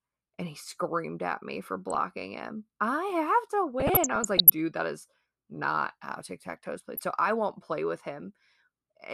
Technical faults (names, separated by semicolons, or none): DAB burbling